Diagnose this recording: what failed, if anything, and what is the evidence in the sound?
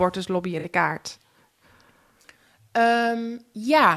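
Codec stage: a corrupt frame concealed twice, at 0.59 to 0.65 s and 2.22 to 2.24 s, each fitting a couple of damaged AAC frames. The decoder caught the flipped bits and muted or smeared over them.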